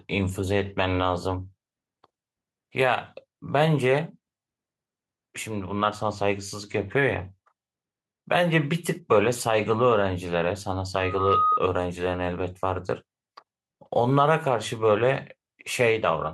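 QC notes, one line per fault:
10.96–11.61 s, loudspeaker feedback squeal: a single tone at 1.2 kHz rises out of the speech, taking roughly 0.4 s to swell from nothing to a squeal that sits about 5 dB above the speech before it cuts off. The microphone is hearing the loudspeaker it drives, and at 1.2 kHz the round-trip gain passes unity, so that frequency keeps feeding itself and grows on every pass until the loop is broken.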